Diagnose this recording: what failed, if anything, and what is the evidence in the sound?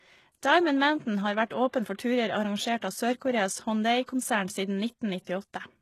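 The codec stage shows damage throughout: the speech has a synthetic, metallic top end with nothing above 12.3 kHz, and sibilants sound gritty. This is likely HE-AAC compression, rebuilding treble by copying lower bands upward, which fits a very low bitrate near 16 kbps.

Pre-echo appears from 5.23 to 5.27 s, a short hiss spread over about 40 ms ahead of a sharp onset that then sounds softened. The transform codec smeared quantisation noise across its block, filling the quiet gap before the attack.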